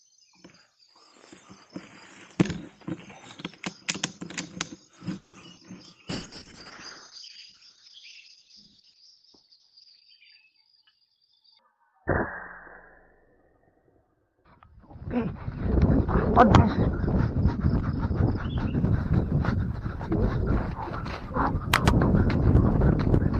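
A tight cluster of call-network faults hits this audio around 5 to 6 s, and a long stretch of degraded coding follows. From 5.17 to 5.35 s the sound does not break off. The last sound is carried on as a fading buzz or hiss for about 160 ms, and then the audio resumes exactly where it stopped, with nothing lost. That is a call audio freeze, most likely packets held up in transit until the jitter buffer ran dry. It differs from a dropout because nothing goes silent, and from a skip because no content is missing; the audio has simply been pushed later by that 160 ms. At 5.41 to 5.44 s comes a much briefer short concealed packet loss. About 20 ms of audio never arrived, and the receiver extended the preceding sound to bridge it before blending back. The result is a tiny smear or wobble rather than a held tone, which is what separates it from the longer freeze just before. At 5.56 to 5.59 s the opposite happens, a skip ahead. 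Roughly 70 ms of audio is discarded and playback jumps forward almost seamlessly, cutting the built-up delay. Unlike concealment, there is only a sliver of filler here, far too little to mask the hole; the two sides are butted together and material is actually gone. From 5.86 to 6.40 s a jitter buffer slow-down stretches the audio to 89 percent speed by repeating single pitch periods and bits of pause, adding 64 ms. The pitch stays put while sounds are drawn out, which distinguishes it from a tape-style slowdown, where pitch would drop too. Starting at 6.10 s and lasting until 18.87 s, a call bitrate drop takes the encoder from 32 kbps down to 7 kbps, spending 3.88 s at the lowest rate. The audio band shrinks from 20 kHz to 6 kHz, so the sound turns muffled as well as rough and watery. This is spectral and textural damage rather than a timing effect, and it persists across the stretch instead of appearing as discrete glitches. 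Inside that stretch, from 10.55 to 12.28 s, a jitter buffer speed-up runs the audio at 109 percent by snipping out short pitch-period segments, removing roughly 150 ms in total so the buffer can shed excess delay. Pitch is preserved while the pacing sounds hurried, and that combination marks it as time-scale adjustment rather than a skip, since the removals are many and small rather than one abrupt jump.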